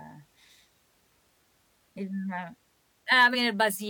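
Damaged data in the compressed stream at 3.30 to 3.36 s in this speech: corrupted bytes make the decoder misread frames and lose sync, producing a brief glitch.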